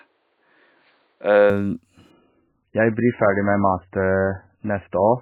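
From the start to 1.5 s the speech is band-limited, with nothing above 4.6 kHz, a dull, boxy sound, likely from the input switched to a poorer device. Unlike a codec drop, the sound is clean and unsmeared, carries a faint new noise floor, and stays at the same level with no gap.

From 2.11 s to the end the adaptive stream drops to a lower bitrate. Everything above 3 kHz vanishes, and the speech turns watery with swirling artefacts, which fits a fall from around 128 kbit/s MP3 to under 10 kbit/s. The warbling, rather than a clean narrowing, marks it as a codec fault.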